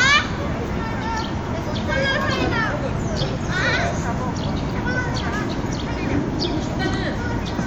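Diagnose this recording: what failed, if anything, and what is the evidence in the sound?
Nothing failed: no fault can be heard anywhere in this recording of everyday sounds, so there is no evidence of a failure in the sound.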